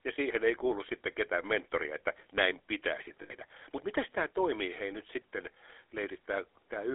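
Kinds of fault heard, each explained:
GSM full-rate codec: The whole clip passes through the original GSM speech codec, which models the vocal tract and excites it with sparse regular pulses. At 13 kbps over a 300 Hz to 3.5 kHz line, the speech carries a plainly audible buzzy, gravelly roughness.
Lost GSM frames: At 3.22 s, right after "mentoria että näin pitäisi", roughly 80 ms of frames go missing until 3.31 s. The decoder repeats the last good frame, so the sound hangs as a brief rough, metallic ring.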